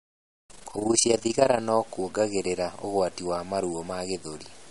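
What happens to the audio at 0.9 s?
At 0.9 s the sound has a fast, rough flutter, a rough tremolo pulsing roughly 30 times a second. This is overlap-add ripple, running from the start to 1.61 s, just before "kuongagirira ugwati wa". Frames were rejoined with overlaps that don't sum evenly, so the level dips by about 11 dB once per frame.

Underneath, the speech is grainy, with a gritty distortion that tracks the signal and sits roughly 25 dB below it. The likely cause is low bit depth without dither, which fits truncation to around 7 bits, so the rounding error follows the waveform instead of forming a steady hiss.

The audio also sounds watery and swirly, with smeared attacks and nothing above 11.2 kHz. This is likely plainly audible MP3 compression at what sounds like a low bitrate near 48 kbps. Weak frequency lines were zeroed and flicker between frames, and the treble was cut off.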